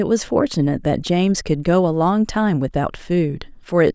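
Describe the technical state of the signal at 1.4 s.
At 1.4 s the speech signal is intact, with no dropout, distortion, glitch or other fault audible at that moment.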